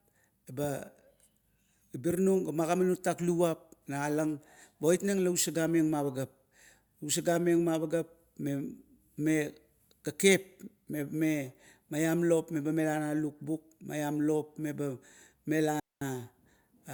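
At 15.80 s the speech cuts out abruptly and stays silent until 16.02 s, a gap of about 220 ms, which is a digital wireless dropout. The radio link lost more data than the receiver could conceal, so the receiver muted its output with a very fast fade instead of passing on corrupted audio. The result is a clean hole of near silence, with no burst of noise or crackle at either edge.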